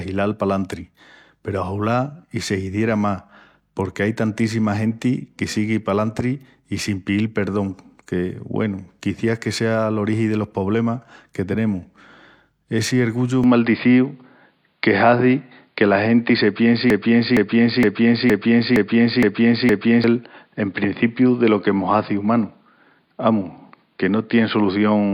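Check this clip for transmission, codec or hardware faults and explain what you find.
Two faults appear in the second half.

From 13.44 s to the end, the input was likely switched to a poorer device: the sound abruptly dulls, loses everything above 4.9 kHz, shifts level by about 5 dB and gains a faint new noise floor, with no gap.

From 16.90 to 20.04 s, a broken-record loop occurs, likely from a stalled stream resending its last buffer: one 465 ms fragment repeats seven times back to back, replacing the audio that should have played.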